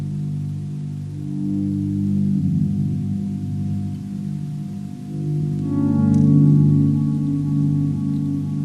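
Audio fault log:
No fault can be heard anywhere in this audio. Nothing in it calls for an entry in the log.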